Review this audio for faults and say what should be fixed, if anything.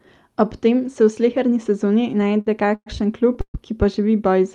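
Repeated stalls (stutter) occur between 2.01 and 2.88 s. The sound hitches nine times, with the longest hold about 110 ms, so roughly a quarter of that stretch is filler. Packets arrived late, the jitter buffer kept draining, and the receiver stretched the last sound each time. Nothing is lost, but the audio drags.

A call audio freeze occurs at 3.41 to 3.56 s. The last sound carries on and fades, then drops to silence for about 80 ms. The audio resumes exactly where it stopped, after a 130 ms hold. The likely cause is packets delayed in transit, which emptied the jitter buffer, so a gap was inserted without anything going missing.

To prevent both, stabilise the network path carrying the call audio and give the jitter buffer enough headroom to absorb delay spikes of at least 130 ms.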